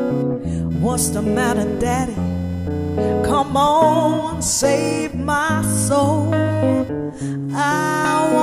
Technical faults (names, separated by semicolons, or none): computer activity noise